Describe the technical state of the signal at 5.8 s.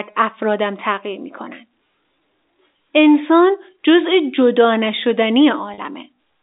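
Just before 5.8 s, from 5.74 to 5.78 s, there is packet loss with pitch repetition. About 40 ms of signal went missing, which fits two 20 ms packets, and the receiver filled the hole by replaying the last pitch period. It sounds like a brief held, slightly buzzy tone rather than a silent gap or a click, which is what separates it from a plain dropout. Around it, the G.711 telephone path still limits the band to roughly 250 Hz to 3.7 kHz.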